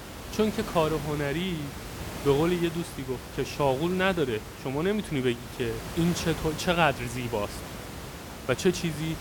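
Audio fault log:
Nothing stood out on listening to this speech clip, and the room noise sits about 11 dB below the speech.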